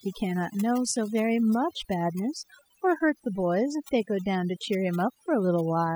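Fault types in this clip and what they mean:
Overdone noise removal: a noise reduction stage set far too aggressively has pulled individual frequency bands down or out whenever they sat close to its noise estimate, and the softer parts of the speech went with them. Across the whole clip the background drops and breaks up into twinkling specks. Unlike a noise gate, which mutes everything at once, this removes bands selectively, so the residue flickers tonally.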